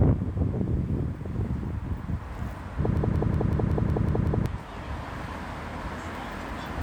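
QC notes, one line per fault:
2.97–4.46 s, system hang loop: the system froze and the hardware kept replaying its last buffer, so a 186 ms slice repeats eight times at about 5.4 Hz, a machine-gun stutter. That fits an 8192-sample buffer, and about a second and a half of real audio is gone.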